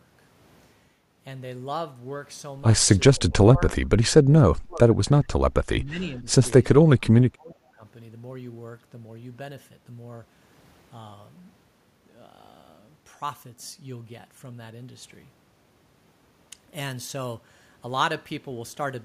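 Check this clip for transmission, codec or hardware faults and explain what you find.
The speech drops in level five times between 3.16 and 7.84 s, in a pattern that points to speech suppressed in double talk.

The dips fall at 3.16–3.32, 3.54–3.75, 4.23–4.98, 5.84–6.27 and 6.71–7.84 s. The first two are light, about 5 and 10 dB, and the later ones reach about 15 to 25 dB, with the last holding for roughly a second. The likely cause is an echo canceller mistaking simultaneous far-end talk for echo and attenuating the near talker along with it. On a waveform the envelope visibly shrinks in those stretches, and a spectrogram shows the energy thinning there, most clearly in the deeper dips.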